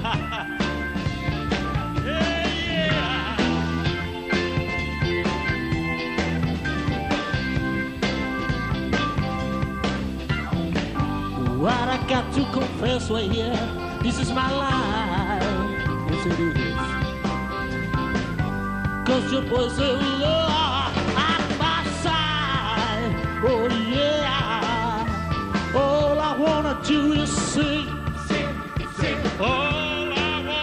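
No technical faults are audible anywhere in the recording.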